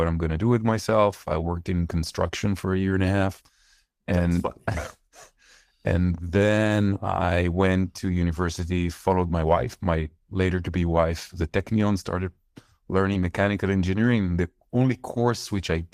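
Speech with four short stretches of lost packets rebuilt from error correction: 4.25 to 4.31 s, 10.95 s just after "my later to be", 13.09 to 13.15 s, and 14.03 s. The first and third sound about 40 ms long, which fits two lost 20 ms packets each. The other two fit a single one. The codec played lower-bitrate copies carried in the following packets, so there's no silence. The waveform stays continuous, and the spectrogram shows brief patches of rougher, noisier texture.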